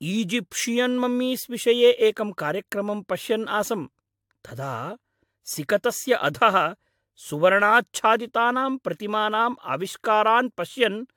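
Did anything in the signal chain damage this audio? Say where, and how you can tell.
Yes, at the codec stage: throughout the speech there is generation loss, with swirly, hollow smearing and blurred attacks. The likely cause is a 96 kbit/s AAC-LC encode repeated about four times. On a spectrogram, energy stops near 18.8 kHz, with smeared onsets.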